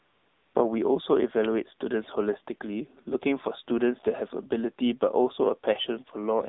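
A smooth, steady hiss opens the recording from 0.00 to 0.54 s, before the speech begins. This is AMR comfort noise. The phone judged that no one was talking, so it sent no speech frames for about half a second. The receiver filled the gap with synthetic noise built from a rough estimate of background level and spectral shape. Any real room sound in that stretch is replaced by this even, featureless noise, which switches off when speech frames resume. From start to finish the speech sounds thin and boxed-in, with no low body and nothing airy above about 3.7 kHz, because it is confined to a line band of roughly 200 Hz to 3.7 kHz. It also has a buzzy, synthetic edge. That is the AMR narrowband mobile codec, AMR-NB. It rebuilds the speech from a vocal-tract model excited by a few pulses per subframe. The damage is plainly audible, which fits a low mode around 7.4 kbps.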